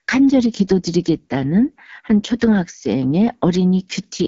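Rough, raspy speech with nothing above 7.4 kHz throughout marks AMR wideband (HD Voice) coding at a low rate, which fits 8.85 kbit/s.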